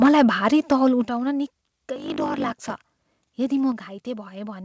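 From 0.02 to 0.22 s, just before "भारी तौल", the microphone input was likely set too high, so peaks ran about 4 dB past the converter's limit and had their tops sliced off, with around 7 percent of samples flattened. This is microphone overload, heard as a harsh, crackling edge on the loudest moments.

At 0.06 s, during that overload, the call software likely reacted to the clipping by cutting the device's input gain in a single step. This is the microphone volume stepped down, dropping both the speech and the background by about 3 dB at once. The same correction happens again at 1.05 s, right after "भारी तौल", with a deeper cut of about 8 dB, and once more at 3.72 s, with a cut of about 4 dB. Each one is an abrupt drop in level rather than a fade.

From 1.94 to 3.33 s, one processing stage writes longer blocks than the next one reads, which fits 1024-sample blocks being written. The tail of each block is discarded, so this is a block size mismatch (truncated). 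It shows up as a 50 Hz buzz from the repeated cuts, and the speech runs 1.07 times faster at roughly its normal pitch.

Throughout, the call path's G.722 coding leaves nothing above 8 kHz.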